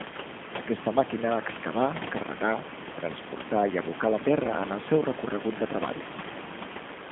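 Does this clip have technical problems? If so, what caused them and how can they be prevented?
Yes. G.729 codec coding runs through the whole clip, and its damage is plainly audible. The speech was squeezed to about 8 kbit/s and rebuilt from a vocal tract filter, a pitch predictor and a few pulses per frame. That gives it a rough, slightly synthetic edge, and the line band runs only from about 150 Hz to 3.5 kHz, so the speech sounds thin. The room noise, about 12 dB below the speech, warbles through the codec too. To prevent this, use a wideband codec such as G.722 or Opus on the call path instead of G.729.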